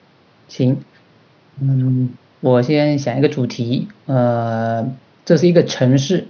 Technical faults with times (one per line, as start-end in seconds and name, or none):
none